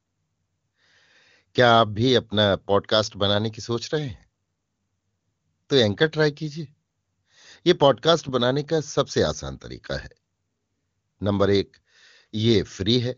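No technical faults can be heard anywhere in the speech. It has passed through the AMR wideband (HD Voice) codec at its top rate of 23.85 kbit/s, where that coding leaves at most a faint trace on the sound.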